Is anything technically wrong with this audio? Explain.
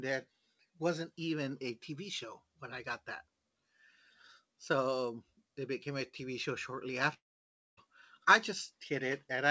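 Yes. From 7.14 s to 7.79 s the speech breaks off: the last sound is briefly stretched into a fading buzz or hiss, then most of the gap is silence, and the speech resumes with about 640 ms missing rather than delayed. This is a long network dropout. The likely cause is that packets stopped arriving, so the receiver concealed the gap by extending the final sound before giving up. On this call path the G.722 codec also leaves nothing above 8 kHz.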